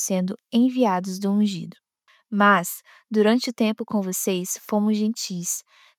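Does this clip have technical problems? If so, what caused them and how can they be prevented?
No, there are no technical faults to point to anywhere in this clip. Since nothing went wrong, there is no cause to trace and nothing that needs preventing.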